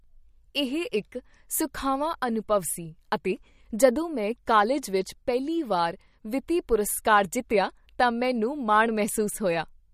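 A speech recording with MP3 compression damage running the whole length. Nothing is present above 15.2 kHz, where the treble stops at a hard ceiling. The damage is plainly audible. Quiet spectral detail flickers in and out between frames, giving the voice a watery, swirling texture. Consonant onsets blur rather than land crisply. The likely cause is an MP3 encoder starved of bits, which fits a bitrate around 48 kbps.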